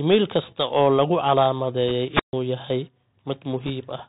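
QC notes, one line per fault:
Throughout, Bluetooth CVSD headset codec: nothing above 4 kHz survives, s sounds turn scratchy and granular hiss sits underneath, which fits a one-bit 64 kbps stream whose step size lags loud highs.
1.88 to 1.91 s and 3.63 to 3.70 s, bit errors on a Bluetooth voice link: brief rushing crackle, no sharp clicks, because each flipped bit only nudges the signal slightly and the error fades quickly.
2.09 to 2.33 s, wireless microphone squelch dropout: static swells, then about 140 ms of near silence as the fading FM signal trips the receiver's squelch, before the speech returns.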